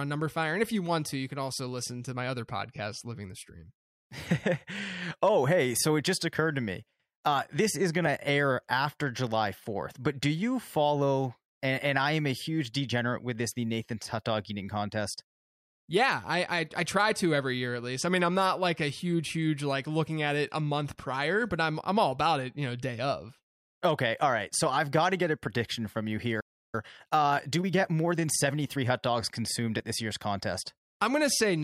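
At 26.4 s the player most likely ran short of buffered data or had its output thread held up, so playback stalled: the speech cuts out mid-flow and silence holds for about 0.33 s, until 26.75 s, before the sound resumes where it broke off.

To recover the backlog, the player then applies time-compressed catch-up from 26.75 s to 28.93 s, trimming and cross-fading small slices so the speech runs at 1.15 times normal speed. It sounds hurried but keeps its normal pitch.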